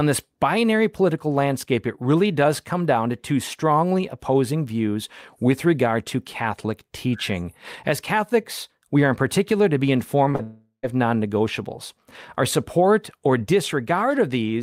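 At 10.31 s and again at 10.35 s, short concealed packet loss briefly smears the speech. About 20 ms, then 40 ms, of audio were missing and were patched by extending the preceding sound.

From 10.43 s to 10.85 s, the sound turns into a fading synthetic continuation, then nearly 0.1 s of silence before speech resumes without its missing part. This is likely a long network dropout.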